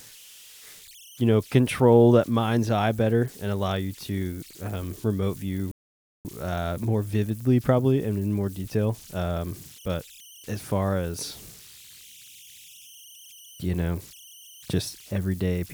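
From the start and through the whole clip, converter idle tones sit under the speech. A whistle near 3 kHz is audible in the pauses. Beneath quiet passages it becomes a grainy hiss. It runs about 25 dB below the signal. The cause is a delta-sigma converter working without dither. With a small input, it settles into repeating bit patterns. Those patterns produce the tone, and its pitch follows the input's offset.

At 5.71 s a rebuffering stall cuts the speech to silence. The gap lasts until 6.25 s, so 535 ms of dead air is added. The player had run out of downloaded audio and waited for more to arrive. When it resumes, it picks up exactly where it stopped. Nothing is skipped or repeated. The clip simply runs half a second longer.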